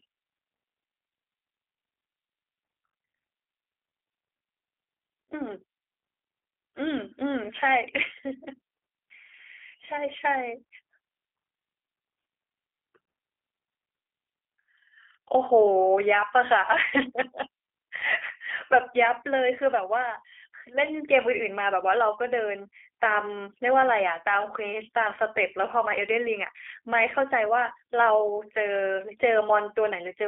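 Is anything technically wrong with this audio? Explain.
Yes. Throughout, the speech carries G.729 codec damage. The codec rebuilds each 10 ms frame from a vocal tract filter, a pitch predictor and a few pulses, which fits an 8 kbit/s G.729A line. It sounds plainly rough and synthetic. A spectrogram shows energy confined to roughly 300 Hz to 3.4 kHz, blank above.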